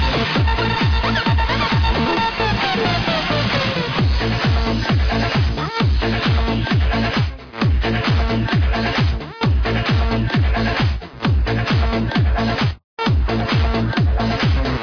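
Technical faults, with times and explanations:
No technical faults are audible anywhere in this audio, and the signal is continuous throughout.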